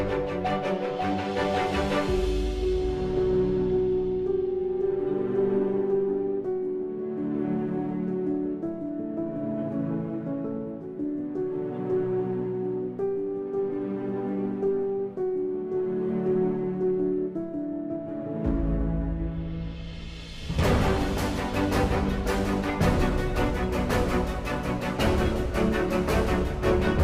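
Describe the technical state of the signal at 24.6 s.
At 24.6 s the signal is intact, with no dropout, distortion, glitch or other fault audible at that moment.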